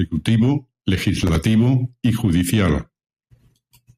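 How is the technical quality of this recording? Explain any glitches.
There is one glitch in the speech: a processor overload crackle from 1.22 to 1.36 s. For a little over a tenth of a second, a gritty, tearing crackle sits on top of the sound and then stops. It comes from the processor falling behind and missing several of its audio deadlines in a row. Buffers of around 5 ms each were left unfinished, and each of them was filled with stale audio. Each replay butts against the live signal with hard edges, and together those edges make the rasp.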